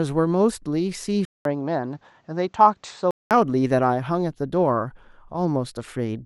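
From 1.25 s to 3.31 s the speech goes dull, losing everything above 8.3 kHz, with a faint new background hiss and loudness holding roughly steady. It opens with a 200 ms gap and clears again at 3.31 s, likely an input switched to a poorer device.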